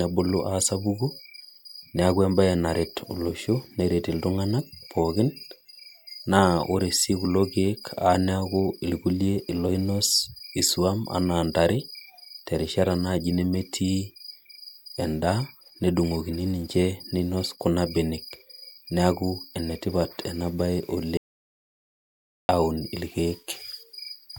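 At 21.17 s the speech cuts off mid-flow and the audio drops out to silence until 22.49 s, losing about 1.3 s with no room tone at all. The input was likely lost while silence kept being written. The waveform shows a flat line, and the spectrogram a blank band.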